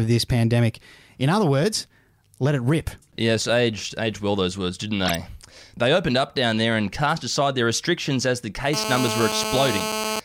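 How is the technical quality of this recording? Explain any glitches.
Two faults are audible in this speech recording.

At 5.05 s, just after "well those words didn't", a corrupt frame decoded produces a brief glitch peaking near -10 dBFS and lasting 0.1 s. Flipped bits across a handful of compressed frames misplace energy across the spectrum.

From 8.74 s to 10.2 s, after "their restrictions as the", GSM phone buzz appears. It is a hard, raspy 217 Hz drone with many harmonics, about 4 dB below the speech. A nearby phone on a call transmits in 217 Hz bursts that the audio circuit rectifies, so the buzz stays steady.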